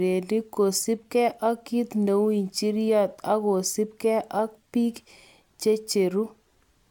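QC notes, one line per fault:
5.45 s, repeated buffer: just after "injiryot okosibge ak bik", a 5.33 ms slice plays two extra times with hard joins, which fits a 256-sample buffer. Unlike a dropout, nothing goes silent. The looped slice replaces about 10 ms of speech and is heard as a brief buzzy click.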